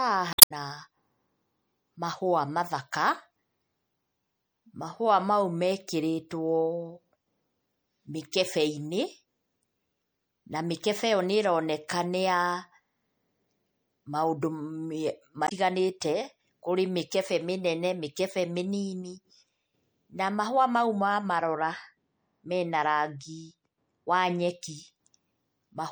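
Throughout the clip, the speech has a watery, swirling quality, with s sounds that chirp metallically and consonant attacks that smear. This is most likely MP3 compression at a low bitrate, around 64 kbps. When bits run short, the encoder discards weak frequency lines. Those lines then flicker on and off from frame to frame, which produces the swirl.

From 0.30 to 0.52 s, and again from 15.44 to 15.52 s, damaged data in the compressed stream causes a brief glitch in the sound. At these points the decoder meets corrupted bytes, misreads or rejects the affected frames, and loses sync. It then skips ahead until it finds the next valid frame header, so a short stretch of audio is garbled or missing.

From 21.39 to 24.49 s, de-emphasis is applied wrongly, and the speech turns dull and muffled, as if heard through a blanket. A treble-cut filter intended to reverse pre-emphasis has been applied where none existed, or a second time. 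The result is a smooth downward slope toward the high frequencies, reaching about 11 dB down at 10 kHz relative to 1 kHz, which dims sibilants and takes the crispness out of consonants.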